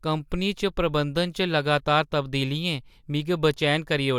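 Listening to the speech recording, nothing stood out as a technical problem at any point.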